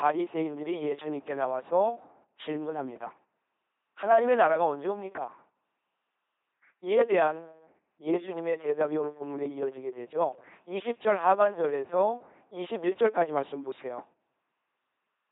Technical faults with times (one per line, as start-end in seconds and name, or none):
0.00-15.31 LPC-10 vocoder